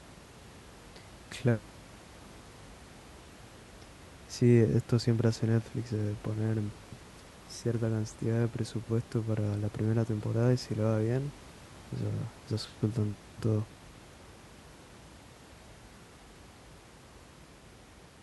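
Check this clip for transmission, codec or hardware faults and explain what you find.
No transmission, codec or hardware fault can be heard in the speech, and the only background sound is room noise at about 22 dB below the voice, which belongs to the recording space rather than the signal chain.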